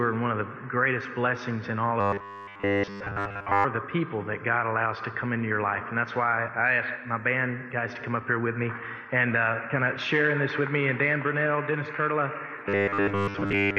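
Robotic sound from repeated short buffers at 2.01–3.66 s and 12.69 s to the end: a rigid 100 Hz buzz, fitting 10 ms chunks looped while audio is skipped, likely from data arriving too seldom. Unlike comb filtering, which only colours the existing sound, this imposes a buzz at a fixed rate regardless of the sound.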